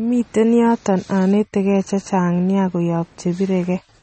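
From start to finish the speech carries plainly audible damage, likely from MP3 compression at a low bitrate, which fits roughly 32 kbps. The treble stops dead at 8.4 kHz, dulling s sounds, while weak frequency components drop in and out between frames, giving a watery, swirly texture and smeared consonant attacks. On a spectrogram there is a flat ceiling at 8.4 kHz with empty space above, and speckled, patchy holes flickering through the upper bands.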